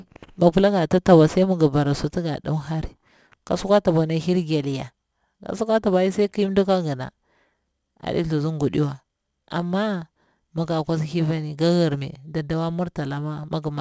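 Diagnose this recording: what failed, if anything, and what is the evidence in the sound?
Aliasing runs through the whole recording, and the fault sits at the sample-rate conversion stage. Sibilants sound gritty and metallic from start to finish. The spectrum runs hard up to a sharp edge at 8 kHz, which points to a drop from a 44.1 kHz to a 16 kHz rate. The converter skipped the anti-alias filter. Energy above 8 kHz folded back down as false tones, sitting around 30 dB below the speech.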